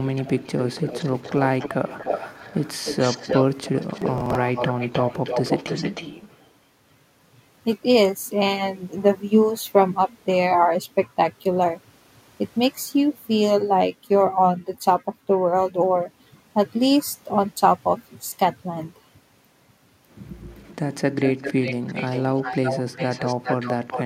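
From 0.05 to 1.43 s, 1.59 to 3.43 s and 3.64 to 6.46 s, an echo leak returns the speech about 282 to 305 ms late, about 10 to 15 dB down. The far end's echo canceller likely let its loudspeaker pickup through.

From 4.02 to 4.35 s, processor overload crackle tears through. Around ten buffers of roughly 10 ms were skipped, leaving hard-edged gaps.

The echo leak returns faintly from 20.51 to 20.75 s, about 30 dB down at 386 ms. From 21.17 to 24.03 s it is stronger, about 10 dB down at 396 ms.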